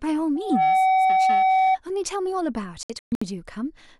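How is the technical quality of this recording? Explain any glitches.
The recording has two clear technical faults, a feedback squeal early on and a broken-up stretch near the end.

From 0.35 s to 1.78 s there is loudspeaker feedback squeal. The microphone is picking up the loudspeaker it drives, and at 756 Hz the loop gain exceeds unity, so that tone regenerates on each pass. It swells over a few tenths of a second into a steady whistle roughly 10 dB above the speech, and it stays there until the loop is broken.

From 2.83 s to 3.22 s there is a digital broadcast dropout. The receiver stopped getting usable frames and muted until valid data returned. The effect is a run of short silent holes across about 384 ms rather than one gap, totalling 256 ms of missing speech, with the longest single hole at 128 ms. That pattern fits eight lost frames of about 32 ms each. The speech in those holes is gone, not masked.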